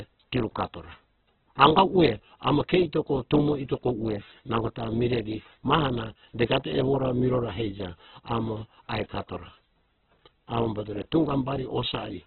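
Throughout, the speech likely passed through Opus compression at a very low bitrate, fitting about 8 kbps in music mode. Short of bits, the encoder fills bands with folded or noise content and narrows bandwidth, cutting everything above 4.4 kHz and leaving the speech muffled, rough and grainy.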